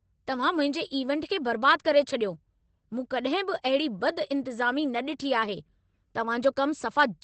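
From start to finish the speech passes through Opus voice compression running at a low bitrate, roughly what a 12 kbps stream in SILK linear-prediction mode would give. The encoder keeps only a wideband channel, so nothing survives above 8.4 kHz, and the excitation is coded coarsely. The result is plainly audible: the speech sounds muffled and lacks crisp sibilance, with a hoarse, slightly robotic grain running through every phrase.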